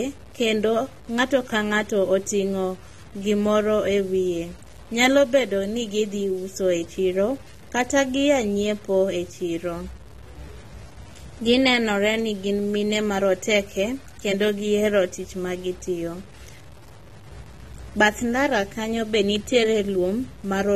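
Speech runs through the whole clip with two faults present from start to finish. The first is a grainy, signal-following distortion that is likely low bit depth without dither. The roughness rises and falls with the speech, about 30 dB below it, and quiet decays break into gritty sputter rather than fading smoothly. That dependence on the signal separates it from ordinary background noise or dithered hiss, which would stay steady in the pauses. The level of grit points to roughly 7 bits, with truncation rather than rounding. Alongside this, the sound is dull and smeared, with a warbling, fizzy texture on held sounds and sibilants. That texture is the signature of AAC compression, which distinguishes it from a plain low-pass filter. Nothing is present above 13.1 kHz. The plainly audible codec damage fits AAC-LC at a bitrate around 32 kbps.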